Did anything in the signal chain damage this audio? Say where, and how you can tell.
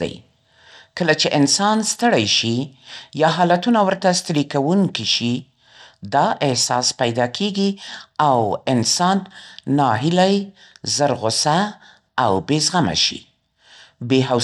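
Yes. Throughout the speech the top end stops dead above 14.2 kHz, and a plainly audible grainy, gritty texture rides on the sound. That points to the codec stage, likely Bluetooth SBC compression starving the upper sub-bands and coarsely quantising the rest, consistent with roughly 96 kbps.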